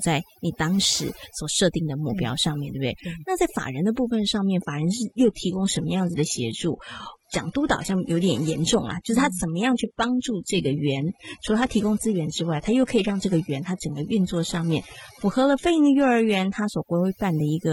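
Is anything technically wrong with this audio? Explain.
Yes, there are two problems. Overdone noise removal runs through the whole clip. The denoiser was set too hard, so it shuts off frequency bands sitting near its noise estimate and takes the quieter bits of speech with them. You get near-silent gaps with little twinkling specks.

From about 4.65 s to 16.65 s there's an adaptive stream at a lower bitrate. The connection seems to have dipped, and the player swapped mid-stream to a much leaner encode, with no gap. The treble cuts off above about 11.8 kHz, which fits a drop from roughly 96 kbit/s AAC to a low-rate HE-AAC version.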